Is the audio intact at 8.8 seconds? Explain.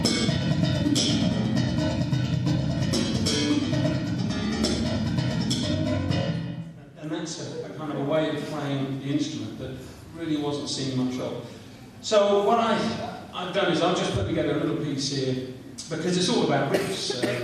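Yes, at 8.8 seconds the audio runs on intact, with no dropout, click, distortion or other fault to be heard at that moment.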